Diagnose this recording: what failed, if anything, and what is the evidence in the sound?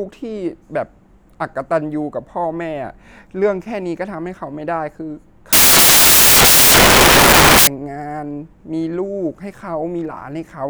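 From 5.53 s to 7.67 s the speech is replaced by loud, harsh broadband noise, a failure at the sample-format conversion stage: samples built from the wrong bytes. The reader assembled each sample with its bytes misaligned or in swapped order, so the rapidly changing low bits landed in the most significant position. What separates this from analogue hiss or clipping is that the noise is loud and harsh and switches on and off abruptly.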